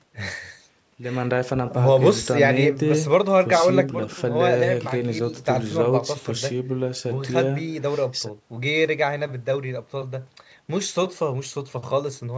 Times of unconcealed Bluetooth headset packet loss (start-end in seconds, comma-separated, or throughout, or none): none